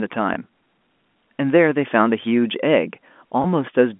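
At 0.34 s and again at 3.42 s, a packet loss with pitch repetition leaves a brief, slightly held buzz in the speech, each lasting about 20 ms, which fits one lost packet per event. The receiver bridged each gap by repeating the last pitch period, so instead of a silent dropout or a click the sound stalls for an instant. The gaps are too short to fade into silence. The G.711 telephone coding keeps the speech inside a 200 Hz to 3.5 kHz line band.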